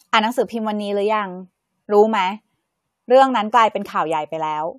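No technical faults are audible.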